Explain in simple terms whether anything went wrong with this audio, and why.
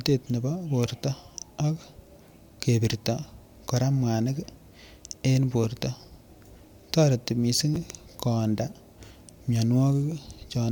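At about 6.14 s and again at 7.74 s, the speech gives a tiny jumbled stutter. This is chunks out of order: the audio travels in very small pieces, about 5 ms each, and one piece arrived two places late and was played after the pieces that should have followed it. Nothing went missing, but the wrong order leaves sharp joins.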